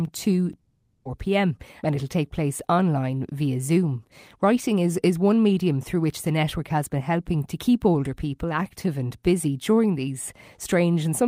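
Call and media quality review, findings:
Long network dropout, 0.59–1.07 s, speech. Likely cause: stream interruption on the network path, with no audio reaching the receiver for about half a second. Receiver concealment stretches the last sound into a fading buzz for roughly 0.46 s, then a brief silence. Speech resumes at 1.07 s with that stretch lost.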